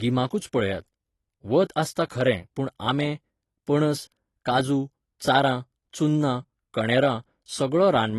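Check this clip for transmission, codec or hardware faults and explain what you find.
One codec fault runs through the whole clip: AAC compression, likely AAC-LC at a low bitrate, with damage plainly audible from start to finish. The speech has nothing above 12 kHz, and what remains sounds dull and smeared, with a fizzy, warbling texture on sibilants and held vowels. That smearing is what separates it from a simple low-pass filter, which would only remove the top. Here the coder has starved bands of bits against its hearing model, leaving holes or noise-filled patches. The texture fits a rate near 32 kbps.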